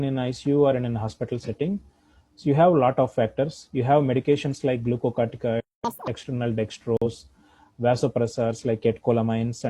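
At 1.43 s, a corrupt frame was decoded: bits inside one compressed frame were flipped, and the decoder played it anyway, misreading its gains and spectral codes. That puts energy at frequencies where it does not belong for roughly a single frame's length, up to 1.50 s. It comes through as a short synthetic chirp or burst of noise sitting on top of the audio and peaking at around -20 dBFS.

From 5.60 s to 5.85 s there is a playback stall. The player was likely starved of data or had its output thread blocked, so nothing reached the output. The sound halts abruptly in mid-flow and leaves a silent gap of about 0.23 s before output resumes. That pause is long enough to register as a distinct dropout rather than a click.

Right after the stall, from 5.85 s to 6.07 s, comes catch-up at higher speed. The player resamples its backlog to win back the lost time, running at 2× speed. Because resampling shifts speed and pitch together, the audio rises by about ten semitones and sounds hurried and chipmunk-like. 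It drops back to normal speed and pitch at 6.07 s.

At 6.97 s, a corrupt frame was muted. The decoder rejected one damaged frame, and the player substituted silence so that timing would stay intact. The result is a hole of one frame length, lasting until 7.07 s, that cuts in abruptly. Roughly a tenth of a second of sound simply vanishes, and the audio continues on schedule afterward with no shift in timing.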